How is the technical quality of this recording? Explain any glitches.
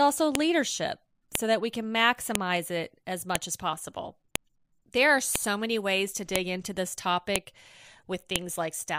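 The recording is marred by one recurring glitch. File header played as audio: a sharp click at 0.35 s and every 1.0 s through 8.36 s, including around "as possible". The speech was joined from one-second pieces whose header bytes were left in, so each boundary plays as a loud snap, regardless of the speech.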